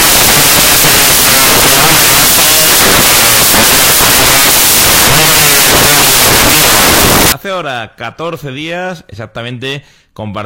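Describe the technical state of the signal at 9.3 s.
The signal at 9.3 s is intact, with no fault audible at that moment.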